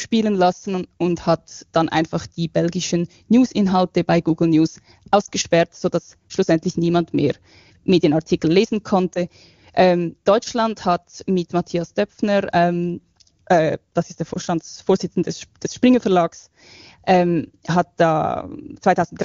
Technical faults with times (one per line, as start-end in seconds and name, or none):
5.25-5.30 lost AMR speech frames
9.13-9.21 lost AMR speech frames
14.33-14.38 lost AMR speech frames